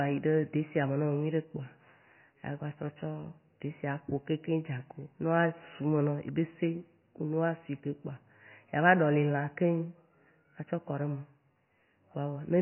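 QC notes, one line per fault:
Throughout, likely MP3 compression: heavy damage, speech cut off at 3 kHz and watery as weak frequency lines flicker between frames, fitting a bitrate near 18 kbps.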